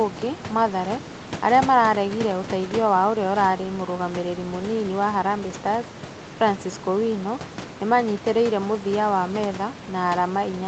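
Speech with no technical fault to point to anywhere in the recording. A low room noise sits about 15 to 18 dB under the speech, and the high end stops at around 8 kHz, which fits a call codec running at wideband bandwidth.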